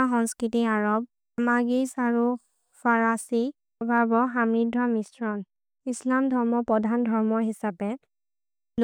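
From 3.98 to 7.42 s the speech turns dull and muffled: de-emphasis applied wrongly, a treble cut meant to undo pre-emphasis, applied to audio that didn't need it, sloping down to about 11 dB lower at 10 kHz than at 1 kHz. The roll-off is gradual and smooth, unlike a low-pass filter's abrupt cutoff.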